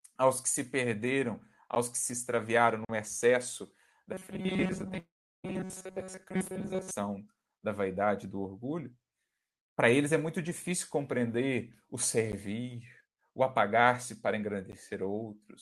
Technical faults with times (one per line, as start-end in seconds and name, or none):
1.75 block of digital silence
2.85-2.89 block of digital silence
4.14-6.91 robotic sound from repeated short buffers
4.99-5.46 long network dropout
12.32 block of digital silence
14.72 block of digital silence